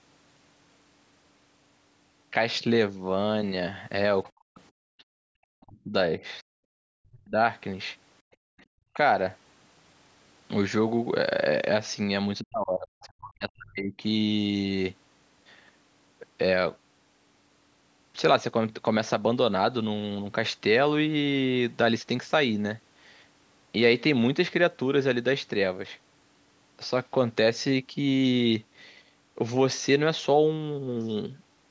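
At 4.24 to 4.31 s and again at 4.98 to 5.04 s, brief scraps of a second voice surface under the speech, faint, the first roughly 25 dB below the talker and the second lower still. This is the other side's voice leaking through, likely loudspeaker sound that the echo canceller failed to remove from the microphone. On a spectrogram they appear as short, weak harmonic smears unrelated to the main speech contours.

From 4.33 to 4.79 s the talker's own speech sinks sharply for about a third of a second, at its deepest by something like 40 dB. This is speech suppressed in double talk: both sides were likely talking at once, and the canceller turned everything down. The waveform shows the envelope collapsing.

At 5.07 to 5.13 s the room sound drops out for a moment, about 40 dB down, and then returns. This is the background gated by the echo canceller while the loudspeaker played. On the spectrogram the noise floor shows a clean vertical notch that is near-silent across the band, which is limited to 8 kHz by the call's processing.

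The same double-talk suppression returns from 5.41 to 7.38 s, carving about a second and a half of chopped, dipping speech, with dropouts deep enough to gap the waveform. The background is gated again from 8.26 to 8.66 s, a dip of about 40 dB lasting roughly 300 ms that appears as another notch in the noise floor.

A small dip of around 10 dB follows at 8.94 s, a faint nick in the envelope. A final stretch from 12.39 to 14.03 s again fragments the speech, with about a second and a half of deep cuts that show as broken, gappy blocks on the spectrogram.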